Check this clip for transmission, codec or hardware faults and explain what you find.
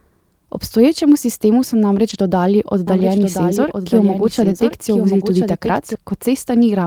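Two faults are audible in this speech clip: brief rebuilt stretches from packet loss, and a doubled audio track.

Lost packet rebuilt from error correction, at 2.09–2.15 s just after "sistemu so" and at 4.37–4.55 s. Packets went missing, and the decoder filled 40 ms and then 100 ms from the low-bitrate backup copies carried in the following packets. There is no gap, but those moments sound rougher and noisier.

Doubled audio track, from 2.87 s to 5.95 s. A second full-band copy of the speech runs about a second behind and about 5 dB quieter. It has no decay or room colour, and it cuts in and out abruptly. The likely cause is a second, slower capture path mixed in with the original.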